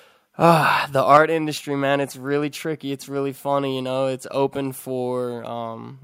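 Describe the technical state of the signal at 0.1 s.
At 0.1 s the speech signal is intact, with no audible fault at that point.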